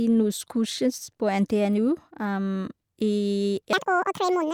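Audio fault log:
3.73 s to the end: section at the wrong speed. The last stretch of speech plays about 1.85 times faster than it was recorded. Speed and pitch jump together at 3.73 s, so the talker suddenly sounds hurried and shrill. The pitch sits roughly ten semitones higher than before. The cause is likely playback or editing against the wrong clock, which runs this part of the audio through too quickly.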